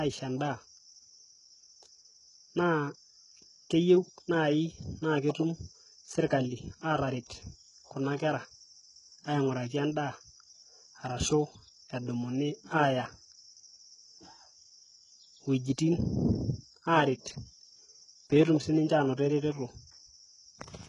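Throughout the speech, the treble has a synthetic, gritty quality, and s sounds come out lispy and metallic. This is likely HE-AAC compression with heavy damage, which fits a bitrate near 12 kbps. Only the lower band is truly coded, and the upper band is rebuilt from copied lower bands, so its harmonics don't line up with the real ones. On a spectrogram, the upper band looks like smeared, repeated blocks of the lower band, and nothing appears above 11.1 kHz.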